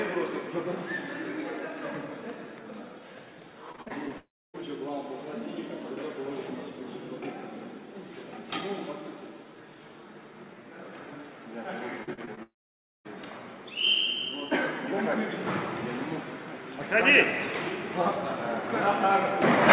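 Audio from a narrowband call path, with nothing above 4 kHz, which fits G.711 mu-law at 64 kbps. Repeated packet loss (robotic sound) hits at 3.72 to 4.12 s and again at 12.04 to 12.39 s. Short holes of up to about 40 ms are patched with repeated sound, giving a choppy texture with pieces missing. Right after each burst the audio cuts out, from 4.18 to 4.56 s and from 12.43 to 13.07 s. A brief fading buzz gives way to near silence, and the sound returns with that part missing. A long network dropout is the likely cause.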